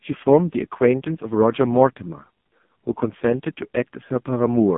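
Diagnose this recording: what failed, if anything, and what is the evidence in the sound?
The codec stage is the culprit: it's the AMR narrowband mobile codec throughout. Nothing gets above 3.8 kHz, the band sits roughly 150 Hz to 3.6 kHz, and the speech comes out buzzy and synthetic, which fits AMR-NB's lowest 4.75 kbps mode starving its vocal-tract model of pulses.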